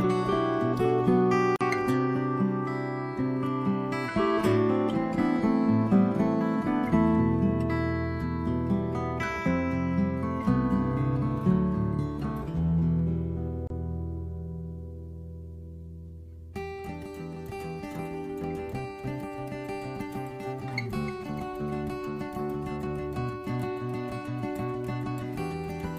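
Separately encoded pieces were joined without trimming their encoder delay and padding, leaving a gap at a join of encoded pieces: brief silences at 1.56 s (47 ms) and 13.67 s (29 ms) with smeared edges, after which the sound resumes where it stopped.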